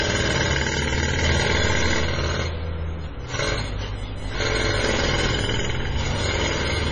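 A recording of everyday sound that carries heavy data-reduction damage for its whole length. Nothing is present above 10.4 kHz, so the top end stops abruptly, and the remaining detail has a watery, swirling texture with smeared attacks, as weak frequency components drop in and out between frames. The likely cause is MP3 compression at a very low bitrate, consistent with something around 24 kbps, where the encoder runs out of bits and sacrifices treble and quiet detail. From 3.97 s to the end, computer activity noise joins the sound: a buzzy, chirping pulse train at a rate of around 1 kHz, sitting roughly 25 dB below the wanted sound. It follows the machine's processing load rather than the audio itself, as shifting current draw disturbs the ground shared with the audio circuitry.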